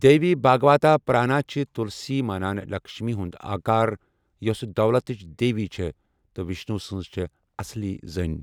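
No technical faults are audible.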